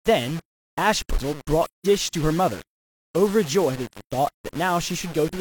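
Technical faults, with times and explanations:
Throughout: low bit depth without dither. The speech sounds grainy and gritty, the roughness rising and falling with the voice, and quiet stretches sputter or drop out. The likely cause is rounding to about 5 bits with no dither, leaving distortion only about 20 dB below the signal.
1.67–1.86 s: AAC frame loss with muting. The speech fades into a soft-edged silent gap of about 0.19 s and fades back. The missing stretch fits four lost frames decoded as silence, with the overlapping windows smoothing both edges.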